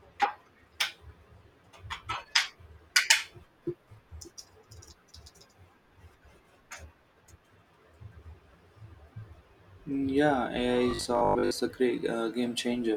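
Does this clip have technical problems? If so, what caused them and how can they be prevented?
Yes. Robotic sound from repeated short buffers occurs from 10.91 to 11.53 s, where the speech turns into a rigid, metallic 50 Hz buzz. The likely cause is audio arriving too seldom, with a 20 ms chunk replayed in place of about half the real audio. A larger jitter buffer and a steadier audio stream would prevent this.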